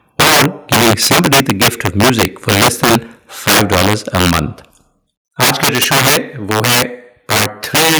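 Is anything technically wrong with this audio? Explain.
Yes, there are three problems, and the worst one runs through the whole clip.

Integer overflow is present from start to finish. The speech was pushed roughly 15 dB past full scale, and rather than being held at the ceiling, anything over the limit wrapped around to the opposite extreme. Around 7 percent of the samples land there, so the loud parts of the speech are hit by sudden full-range jumps. You hear these as harsh, snapping cracks on the peaks, which are much more violent than ordinary clipping.

Microphone overload shows up in three stretches: 0.19 to 0.46 s, 0.72 to 2.96 s, and 3.47 to 4.4 s. The tops of the waveform are flattened here, by about 5 dB in the first stretch and about 4 dB in the other two. The likely cause is the mic input gain being set too hot, so the converter ran out of headroom. It sounds like a gritty, crackly edge on the loudest syllables, with the first stretch the roughest of the three.

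The microphone volume stepped down at 0.21 s. The overall level drops by about 2 dB in one go, and the background drops along with the speech. This is likely the call software reacting to that first distorted burst and cutting the device's input gain. It's a small step, but you can hear it as a sudden dip rather than a smooth fade, and the later stretches still overload anyway.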